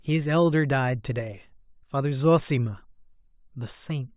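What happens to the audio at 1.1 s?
Nothing goes wrong at 1.1 s; the speech there plays through intact, with no dropout, click, glitch or other audible fault.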